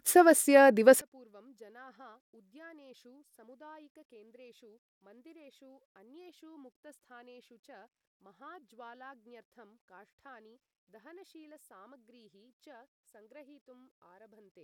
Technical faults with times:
1.01-14.64 one channel inverted

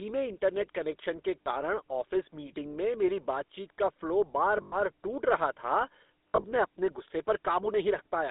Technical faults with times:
0.00-8.31 GSM full-rate codec
1.42-1.47 lost GSM frames
4.62-4.75 lost GSM frames
6.29-6.45 lost GSM frames

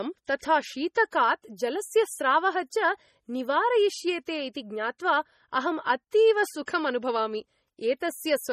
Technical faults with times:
0.00-8.53 MP3 compression

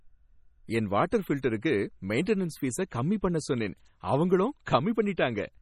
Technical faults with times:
0.00-5.61 MP3 compression
1.11 pre-echo

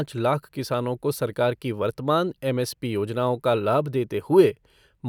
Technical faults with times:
none

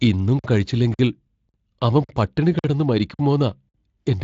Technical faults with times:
0.39-0.44 gap between chunks
0.94-0.99 gap between chunks
1.49-1.54 gap between chunks
2.04-2.09 gap between chunks
2.59-2.64 gap between chunks
3.14-3.19 gap between chunks
3.69-3.74 gap between chunks

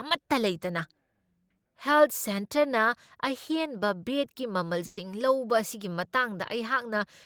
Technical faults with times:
4.85-4.99 burst of packet loss

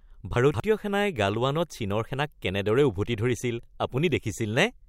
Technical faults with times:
0.36-0.60 chunks out of order

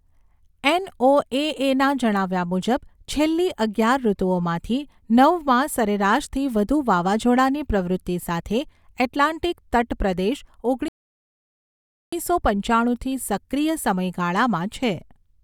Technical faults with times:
10.88-12.13 rebuffering stall

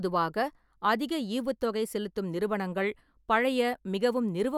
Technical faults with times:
none

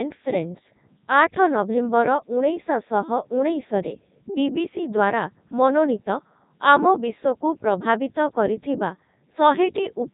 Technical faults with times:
0.00-10.13 Codec 2 vocoder

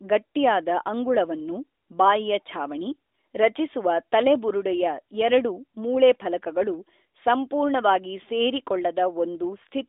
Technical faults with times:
none

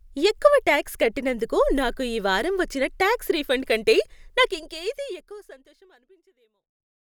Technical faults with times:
none

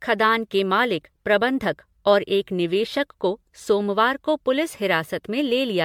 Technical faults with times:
0.00-5.85 generation loss

